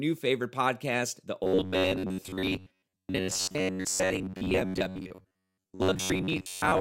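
From 1.44 s to the end of the speech, the clip turns into robotic sound from repeated short buffers: a rigid, metallic buzz near 93.8 Hz that still loosely tracks the speech. The likely cause is audio arriving too slowly, so a slice of roughly 10.7 ms is replayed over and over, for about seven tenths of the time, while real audio is dropped. A spectrogram shows evenly spaced harmonics of 93.8 Hz; the waveform shows identical repeating cycles.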